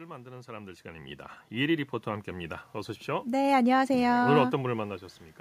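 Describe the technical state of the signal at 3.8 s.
At 3.8 s the automatic gain is rising (3.05 to 5.07 s), lifting speech and room noise together by about 5 dB; the waveform envelope and spectrogram noise floor swell gradually.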